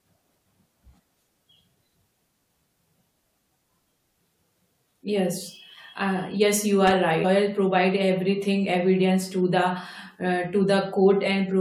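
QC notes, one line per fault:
6.87–6.91 s, loose connector crackle: just after "uh yes you", the speech breaks into a short, ragged burst of crackle lasting about 40 ms. A worn or dirty contact in the signal path is briefly making and breaking. Each break chops the signal on and off. Any DC sitting on the line jumps at those moments and adds pops. The result is an irregular scratchy burst rather than a clean click.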